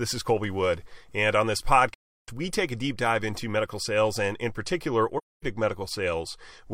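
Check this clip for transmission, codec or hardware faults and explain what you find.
The speech has two dropouts from AAC frame loss with muting. The first runs from 1.93 to 2.29 s, after "on this" and before "we take a deep". The second runs from 5.17 to 5.44 s, after "sales and in particular". Whole frames never reached the decoder, so it zeroed their spectrum. The gaps last about 340 ms and 260 ms, which fits eight and six lost frames. Overlapping windows fade the sound down and back up. Each hole is soft-edged.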